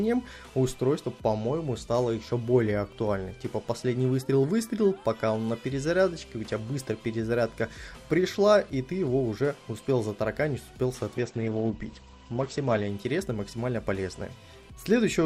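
From 11.18 s to 12.95 s the audio suffers a call bitrate drop. The bandwidth estimate fell and the encoder was starved of bits, and the roughness points to a fall from around 96 kbps to about 13 kbps. For roughly 1.7 s the top end is cut from 20 kHz to 8 kHz and the coarser coding adds a watery, gritty texture. There are no gaps or clicks, as packet loss would cause, and a simple low-pass filter would muffle without the graininess.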